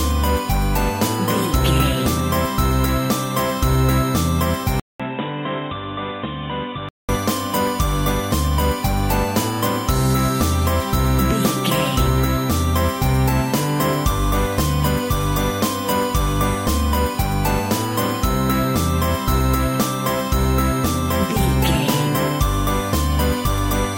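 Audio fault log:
4.80–7.09 s, input switched to a poorer device: recording likely moved to a lower-grade input, so after a 200 ms gap the sound turns dull and boxy, cut off above 3.8 kHz, about 10 dB quieter, with new background noise roughly 35 dB down.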